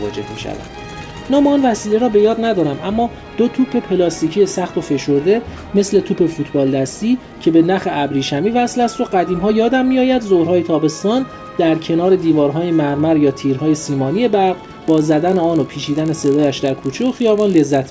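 From 14.48 s to the end, there's a resampler restarted on every block. Each chunk got converted on its own with no memory of its neighbours, so every edge picks up a small error. Those land every 20 ms and blur into a 50 Hz buzz riding on the sound, which fits a 48 kHz to 16 kHz conversion done in 20 ms pieces.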